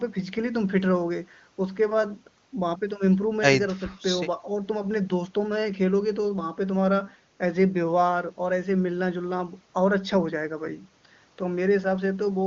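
No technical faults can be heard.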